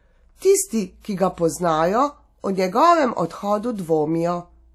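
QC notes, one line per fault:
Throughout, WMA compression: the speech rings and smears, with a hiss that breathes along with the level. This is likely long-block transform coding, consistent with about 48 kbps. Energy still reaches 20.1 kHz, so this is smeared quantisation noise, not a low-pass cut's dullness.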